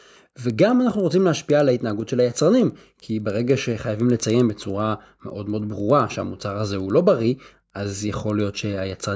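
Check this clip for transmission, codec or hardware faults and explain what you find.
A resampler restarted on every block runs through the whole speech clip. The conversion from 48 kHz to 16 kHz was done one 100 ms block at a time, so each block edge lacked its true neighbouring samples and picked up a small error. That produces a tick ten times a second, a 10 Hz rattle under the speech that vanishes in pauses. A spectrogram shows thin vertical lines every 0.1 s, and the waveform shows small steps at the block joins.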